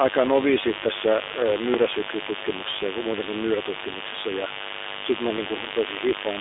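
Mains buzz runs from the start at 0 s to the end. Sharp switching spikes at 50 Hz, twice per mains cycle, have leaked into the signal path, as a dimmer, rectifier or unshielded cable would cause. Their harmonics climb well up the spectrum, so the interference is a steady, raspy buzz rather than a soft hum. It sits at roughly 10 dB below the speech.

An iLBC codec also colours the whole recording. The speech has passed through a narrowband VoIP path that keeps only about 300 Hz to 3.7 kHz, with nothing above 3.8 kHz. The codec rebuilds the excitation independently for each short frame, and the roughness fits 20 ms frames at the 15.2 kbps mode. The damage is plainly audible: the speech stays intelligible but sounds thin, rough and somewhat synthetic, and the buzz underneath is mangled too.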